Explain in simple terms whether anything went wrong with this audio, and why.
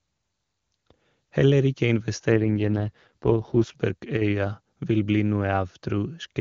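From 2.32 to 3.76 s there is an AMR rate drop. The phone network cut the codec's rate. The voice sounds rougher and more synthetic, but nothing goes missing.

From 4.17 to 4.22 s the sound briefly dips in level. This is likely one channel dropping out, so the combined sound gets quieter.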